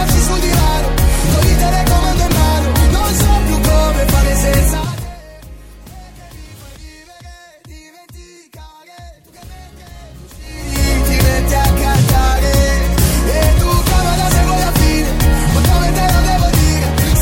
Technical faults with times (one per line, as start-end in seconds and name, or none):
none